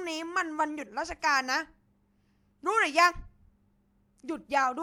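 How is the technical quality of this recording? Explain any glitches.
No technical glitches can be heard in the recording: the speech signal holds steady throughout, without any dropouts, distortion or interruptions.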